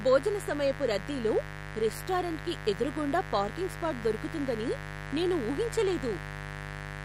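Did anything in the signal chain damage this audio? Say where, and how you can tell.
Yes, in the analogue wiring. A steady, raspy mains buzz at 50 Hz runs throughout the speech, roughly 10 dB below it. Switching spikes from a dimmer, rectifier or missing shield add harmonics.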